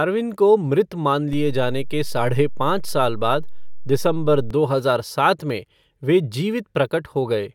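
A DC step shifts the waveform's baseline by about −23 dBFS from 1.33 s, after "मृत मान", to 4.51 s, before "हजार सात में वे". Each edge thumps, showing as a brief low-frequency spectrogram burst.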